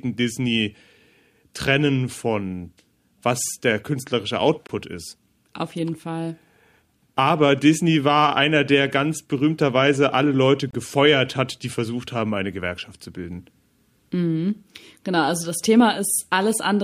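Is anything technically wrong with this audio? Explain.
Yes. This speech clip has two gaps between stream segments. At 4.67 s, just after "von was der künstlerische", the sound drops out abruptly for about 23 ms, with hard edges on both sides. At 10.71 s, just before "gefeuert hat die versucht", the same kind of hole opens for about 27 ms. The two are 6 s apart, which matches the length of one segment. In each case the time stamps of adjacent segments fail to meet, and the player fills the missing stretch with silence. Nothing is lost; the sound after each hole simply arrives slightly late.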